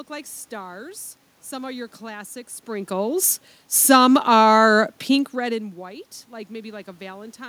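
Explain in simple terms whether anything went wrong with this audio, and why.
Nothing went wrong with the recording system here: the background noise is simply the room the microphone was in, and the voice getting softer or louder at around 2.5 seconds and again around 5 seconds is just the talker moving relative to the microphone.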